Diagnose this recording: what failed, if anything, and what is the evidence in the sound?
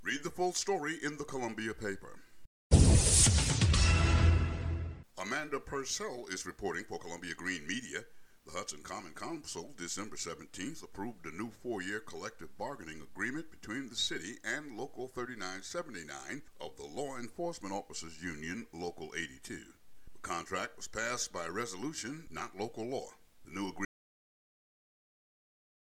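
The input path most likely lost its source, a disconnected device or failed link, while the recorder kept writing silence: an audio dropout to silence. At 23.85 s the sound cuts off mid-flow into silence with no room tone, lasting to the end.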